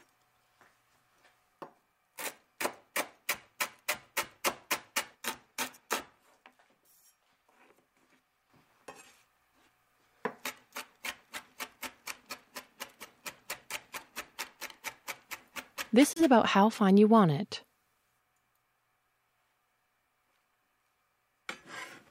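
At 16.13 s the sound cuts out abruptly and stays silent until 16.21 s, then picks up further along, as though it had kept playing through the gap. This is most likely a Bluetooth dropout, where late audio packets never reached the headphones and were discarded.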